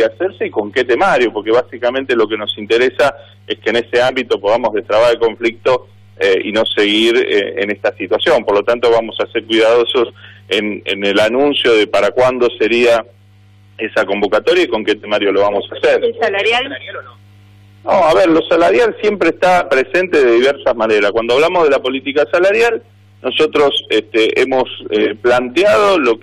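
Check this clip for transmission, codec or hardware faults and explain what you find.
No transmission, codec or hardware faults turn up anywhere in this clip.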